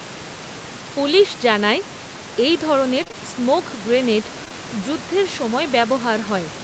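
Short concealed packet loss occurs in a run from 3.03 to 3.15 s and again from 4.45 to 4.54 s. Slices of about 20 ms missed the decoder, which extended the preceding sound instead of leaving silence. Each lands as a brief smear or wobble rather than a hard gap or click.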